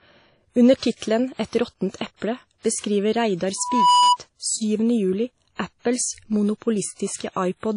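Right through the speech there's plainly audible codec damage, washy and ringing, with nothing above about 10.1 kHz. That's likely WMA compression, which fits a low bitrate around 32 kbps. From 3.58 to 4.17 s a loudspeaker feedback squeal cuts in. The mic is picking up its own speaker, and at 987 Hz the loop gain tips past one, so that tone swells over about a third of a second until it sits a little above the speech.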